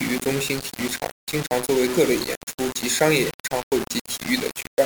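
Low bit depth without dither runs through the whole speech clip: grainy distortion tracks the voice, quiet passages turn gritty and fade into sputtering, and the error sits only about 10 dB below the signal. This likely comes from rounding to around 4 bits without dither.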